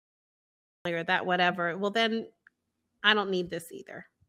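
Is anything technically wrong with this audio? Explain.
Yes, a cut-off start: capture began late, so the audio runs silent until 0.85 s, then drops straight into speech mid-sound, without a natural attack, just before "or that whatever well".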